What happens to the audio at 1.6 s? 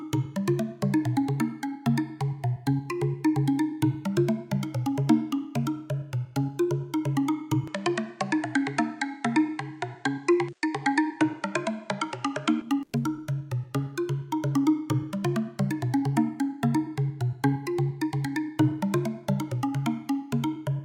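Nothing goes wrong at 1.6 s: the sound there plays through intact, with no dropout, click, distortion or other fault.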